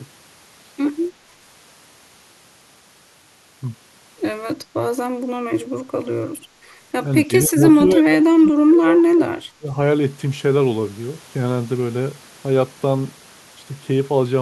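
A speech clip with speech suppressed in double talk, twice: a brief dip of about 20 dB from 7.26 to 7.6 s, then a deeper drop of about 30 dB from 7.96 to 9.76 s. The likely cause is an echo canceller attenuating the talker while the far side spoke. The waveform shows the envelope dropping there, and the spectrogram darkens there.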